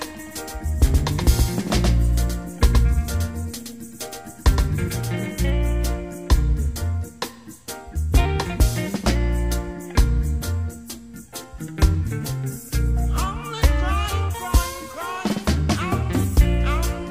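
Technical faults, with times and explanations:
0.0–5.5 s, doubled audio track: already present when the clip begins, every sound is followed roughly a tenth of a second later by a dry, full-band copy a few dB quieter, giving a flat slapback with no room colour, likely from a second, slower capture path being mixed in. On a waveform each transient shows a smaller twin close behind; a spectrogram shows every onset repeated at a fixed offset, and the copy stops abruptly at 5.5 s.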